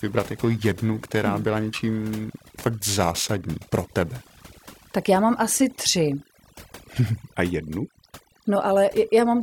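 Speech, with a noise reduction stage pushed too far throughout, which is overdone noise removal: frequency bands sitting near the tool's noise estimate get pulled down or shut off, taking quieter parts of the voice with them, so the background breaks into twinkling, warbling specks. From 0.0 to 4.96 s, periodic clock jitter is present. The converter's clock was shaken at a single rate of about 1.5 kHz, putting sidebands at that spacing around every component, more so the higher ones, which gives the voice a rough, metallic edge that drops away in the pauses.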